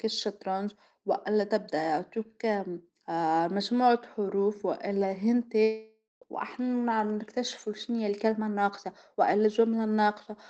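From 5.63 to 6.24 s the stream likely suffered a long network dropout: packets stopped arriving and the receiver had nothing to play. It stretched the last sound into a fading buzz for a fraction of a second, then left about 0.2 s of near silence. About 0.4 s of the speech is simply gone when the sound resumes, and the path now runs roughly a fifth of a second later than before.

That backlog then triggers two jitter buffer speed-ups. With more audio queued than the buffer wants, the receiver trims tiny pitch-period slices over and over. From 6.41 to 7.38 s the speech runs at 108% of normal speed, and from 8.25 to 9.45 s at 107%. Each pass removes roughly a tenth of a second. The pitch stays put, but the phrasing sounds slightly hurried. Throughout, the call codec's band-limited, coded sound, cut off at 8 kHz and consistent with Opus at around 20 kbps, carries on underneath.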